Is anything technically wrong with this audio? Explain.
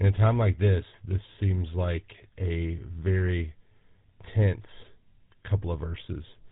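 Yes. Throughout the speech, the GSM full-rate codec has left plainly audible damage. The codec models the vocal tract and drives that model with a sparse, regularly spaced pulse excitation, so the voice takes on a buzzy, gravelly roughness, and nothing survives above about 3.8 kHz. The dull top end alone would suggest simple narrowband telephone filtering, but that leaves voices smooth. The added grit points to this codec, which fits a 13 kbps bitrate.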